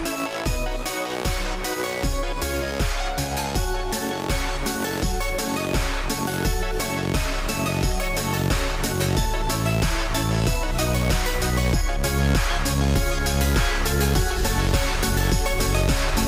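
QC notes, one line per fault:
No audible faults detected.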